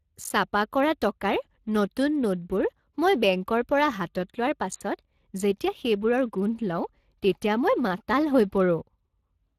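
A grainy, hoarse roughness runs through the whole of this speech recording, with the upper band ending sharply at 15.2 kHz. That texture is plainly audible Speex codec damage. Speex is a CELP speech codec that rebuilds the voice from a predicted spectral envelope plus a coded excitation signal. The amount of coding damage here fits a rate of roughly 22 kbps, where the excitation carries too few bits to stay clean.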